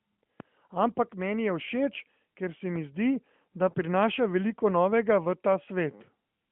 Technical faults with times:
0.40 DC step
3.70-3.75 lost AMR speech frames

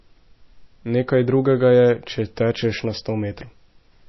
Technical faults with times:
0.00-4.09 MP3 compression

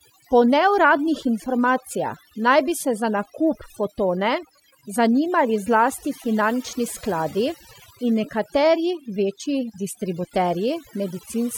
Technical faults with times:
0.00-11.57 overdone noise removal

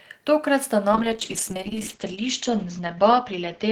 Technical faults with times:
0.96-3.71 call bitrate drop

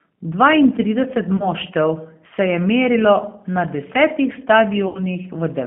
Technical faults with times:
0.00-5.67 G.729 codec
1.37-1.49 VoIP packet loss concealed by the speech codec
4.88-5.00 VoIP packet loss concealed by the speech codec

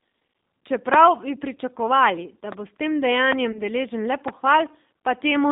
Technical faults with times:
0.00-5.52 G.729 codec
3.52-3.61 VoIP packet loss concealed by the speech codec

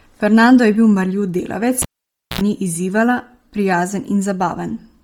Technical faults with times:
0.00-5.04 Bluetooth LC3 compression
1.82-2.41 cable pulled and plugged in

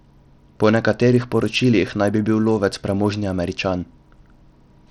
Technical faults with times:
0.00-4.91 Bluetooth SBC compression

